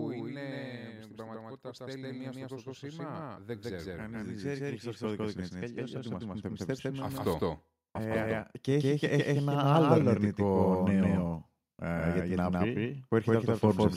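From the first moment to the last, the speech carries a doubled audio track: a second full-band copy at about the same level as the original, trailing it by roughly 150 ms. It has no decay or room colour, just a hard, slap-like repeat of every syllable. The copy likely comes from the signal being captured twice, once over a slower path, so two identical streams are summed out of step.

From 0.05 to 1.65 s there is automatic gain falling. The gain control judged the opening too loud, or its background noise too strong for the starting gain, and pulled its gain down by about 4 dB over that span and a half. The result is a level that starts high and sinks steadily, with the background dropping in step with the speech, which shows the change happens in the gain stage rather than in the talker.

Almost immediately, from 1.61 to 9.93 s, automatic gain rising takes over. The control now sees the input as too quiet and lifts its gain by about 17 dB over roughly eight seconds. 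Speech and background noise swell together in a slow, continuous climb, so the floor grows audibly louder along with the speech.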